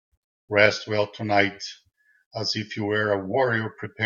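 From 0.66 s to the end, the speech turns hollow and phasey. This is channel delay (comb filtering). One channel runs roughly 10 ms late, and the two sum to mono. Shared content cancels at evenly spaced notches, the first near 50 Hz.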